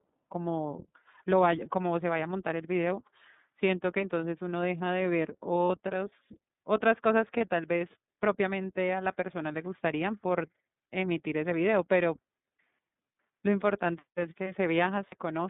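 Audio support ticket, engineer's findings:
iLBC codec, whole clip: narrowband speech, band roughly 150 Hz to 3.7 kHz, nothing above. Audible roughness and synthetic edge from per-frame excitation coding, 30 ms frames independent of each other; sound consistent with the 13.33 kbps mode.

Lost iLBC frames at 5.67, 7.37 and 15.09 to 15.15 s: single 30 ms frame each. Decoder conceals by repeating last pitch cycle with noise, heard as brief held buzzy vowel; voice recovers immediately after, frames being self-contained.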